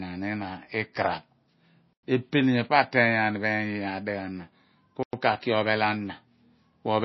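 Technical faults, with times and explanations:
Throughout: MP3 compression. The speech sounds dull and watery, with nothing above 5.8 kHz and a swirly, metallic edge on sibilants where quiet detail flickers in and out. This plainly audible damage is likely from MP3 encoding at a very low bitrate, about what 24 kbps would give. Starved of bits, the encoder cuts the treble at a fixed point and drops weak frequency components frame by frame, so texture shimmers and consonant onsets blur.
1.93–2.03 s and 5.03–5.13 s: gap between chunks. Twice the sound stops dead for 100 ms, then carries on as if nothing were missing. The holes come 3.1 s apart, which points to the audio being handled in 3-second chunks with silence inserted at each join, such as padding or a late start of the next chunk. The speech keeps its continuity, but the flow is broken at each boundary.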